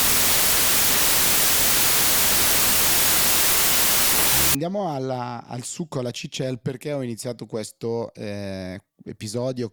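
From 0 to 4.55 s there is a wrong sample width fault: 32-bit integer audio read as 16-bit. Each sample becomes two values, so the speech plays at half speed, an octave low, buried in loud noise. A sample rate error would slow it cleanly, without that noise.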